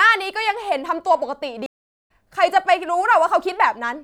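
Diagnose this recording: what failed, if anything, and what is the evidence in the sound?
Speech cuts to silence from 1.66 to 2.10 s and resumes roughly 0.4 s further on, so a stretch is skipped, not delayed. That is a stream reconnect at the network stage: the connection dropped, and the player reconnected and restarted its decoder mid-stream.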